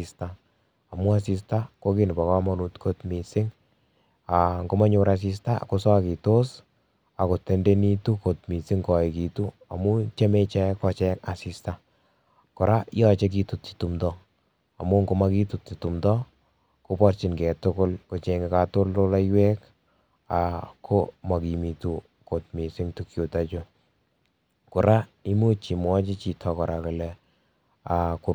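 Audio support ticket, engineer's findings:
No faults found in clip.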